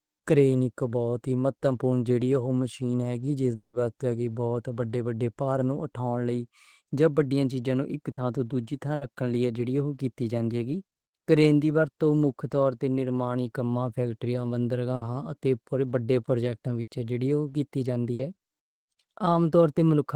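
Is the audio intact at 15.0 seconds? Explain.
No. At 15.0 seconds the speech is hit by a burst of packet loss running from about 14.95 to 15.04 s. The receiver covered the gap by continuing the last sound it had and fading it down over roughly 60 ms, and about 60 ms of speech is simply gone. Unlike a plain dropout, which would fall straight to silence, this fills the gap with a fading held tail and then jumps ahead.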